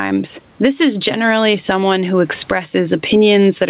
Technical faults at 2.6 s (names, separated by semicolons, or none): gain pumping